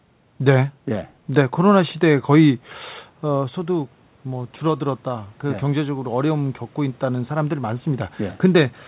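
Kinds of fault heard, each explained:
Automatic gain rising: from 3.31 s to 8.48 s the gain control climbs about 8 dB to make up for an input that dropped about 9 dB around 3 s, so voice and room noise swell together; the waveform envelope and the spectrogram's noise floor both brighten steadily.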